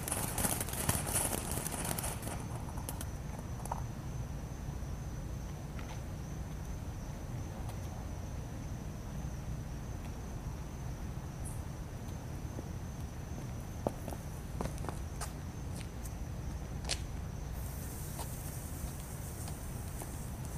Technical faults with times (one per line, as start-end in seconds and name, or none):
none